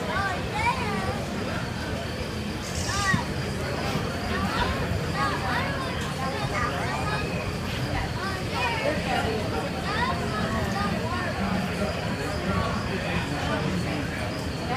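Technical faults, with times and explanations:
Nothing stood out on listening to the clip.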